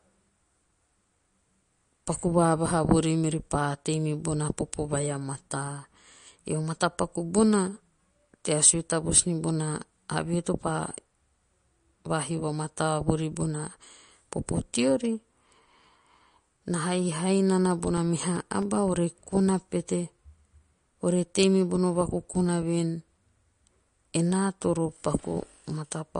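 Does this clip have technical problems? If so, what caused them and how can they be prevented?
Yes. Throughout the speech there is plainly audible watery, swirling smearing, and nothing survives above 10 kHz, likely from MP3 compression at a low bitrate that points to around 40 kbps. On a spectrogram, energy stops at a flat ceiling near 10 kHz, and weak frequency bands flicker on and off between frames in patchy blocks. Encoding once from the original at a higher bitrate, such as 128 kbps or more, prevents this.

Right after "na haihai", from 17.58 to 18.88 s, there are CD scratch ticks: 11 regular ticks in about 1.3 s, roughly eight or nine a second, the longest lasting a few milliseconds. Each one is a disc blemish passing the laser on a rotation, leaving more damage than error correction can rebuild, so the player fills in or mutes those samples. A waveform shows evenly spaced spikes or tiny gaps, and a spectrogram shows thin vertical lines. 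Cleaning or resurfacing the disc, or ripping it in secure mode with re-reads, prevents these ticks.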